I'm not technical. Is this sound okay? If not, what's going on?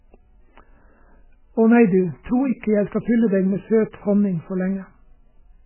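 No. The speech sounds muffled and watery from start to finish, with nothing above about 3 kHz, so s sounds turn dull and swirly. This is likely heavy MP3 compression: squeezed too hard, the file discarded its treble and faint detail.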